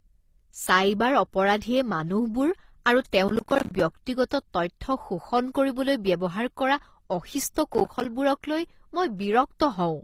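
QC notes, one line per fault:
Throughout, transcoding between lossy codecs: the speech carries two different kinds of coding artefacts heard together, and nothing comes through above about 15.9 kHz. Two different sets of coding artefacts sit on top of each other, which likely means a low-rate encode like HE-AAC was re-encoded into something like Opus. The second codec wasted bits preserving the first one's damage, and the lower cut-off carried through the chain.
3.28–3.80 s and 7.74–8.05 s, processor overload crackle: two bursts of gritty, tearing crackle ride over the speech. The second starts right after "কৰিবলৈ ব্যৱহাৰ কৰা অশিষ্ট". The texture fits a processor missing its deadline on short, roughly 10 ms buffers many times in a row. Each miss drops a sliver of silence with hard edges, and the rapid string of clicks merges into crackle. The first burst is longer and busier, and each burst stops once the load eases.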